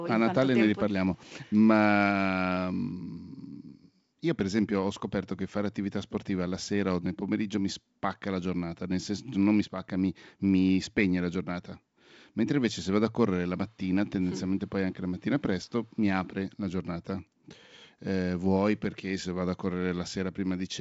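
No technical faults are present.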